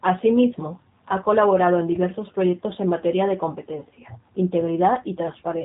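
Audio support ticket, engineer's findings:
Whole clip: rough, synthetic speech, nothing above 3.8 kHz. G.729 codec in path; pulse-based excitation at a rate consistent with 8 kbit/s strips detail, damage plainly audible.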